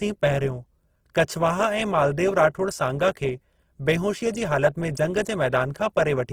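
Speech clip with plainly audible Opus compression damage throughout, most likely from the music (CELT) mode of the codec at a low bitrate, consistent with around 16 kbps. The bandwidth stays full, with content reaching about 20.2 kHz, but the encoder is short of bits, so it fills bands with folded or noise-like energy instead of leaving gaps. Voiced sounds come out rough and grainy rather than swirly, giving the whole recording a noisy texture.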